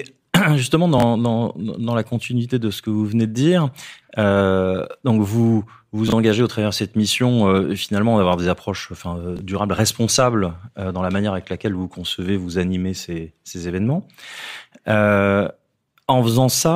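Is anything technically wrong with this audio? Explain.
Yes, this speech has chunks out of order at 0.98–1.02 s (just before "dans dans la continuité"), 6.08–6.12 s (between "dire euh donc vous" and "engagez au travers de") and 9.37–9.41 s (after "des approches enfin euh"). Each time, a roughly 21 ms chunk plays one slot late, swapping places with its neighbour. That puts hard joins at the swap, so you get a brief jumbled stutter.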